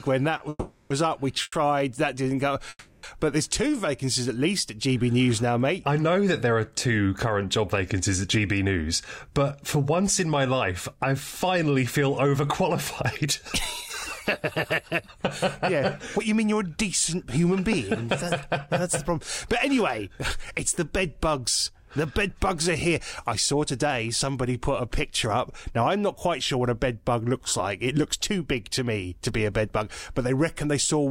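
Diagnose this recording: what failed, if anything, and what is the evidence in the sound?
The network and jitter buffer stage failed first with a short stall from a late packet at 0.37 to 0.41 s. One packet missed its slot, so the receiver held the last sound for about 20 ms and then resumed from the same point. Nothing is lost, but the timeline shifts by 20 ms. On a spectrogram the harmonics run flat and unchanged for that instant. The waveform shows one period repeated, with a slight buzz or dip.

Call audio freezes follow at 0.49 to 0.92 s, 1.42 to 1.54 s and 2.69 to 3.05 s, filling about 410 ms, 100 ms and 340 ms. The likely cause is packets delayed in transit that emptied the buffer. The receiver extended the last sound as a decaying buzz or hiss, ending in 30 to 40 ms of silence each time, then resumed with nothing skipped. On a spectrogram these appear as horizontal smears fading to a blank strip. 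The waveform tapers down to a flat line.

Jitter buffer speed-up runs from 13.2 to 25.3 s at 104% speed, removing about half a second in total. It runs again from 28.83 to 29.52 s at 108%, removing roughly 70 ms. Having over-filled, the buffer trimmed one or a few pitch periods repeatedly to shed delay. The result runs faster at unchanged pitch, and the 108% stretch sounds hurried. The spectrogram keeps the harmonic spacing but compresses events in time, and the waveform shows periodic splices where cycles were dropped.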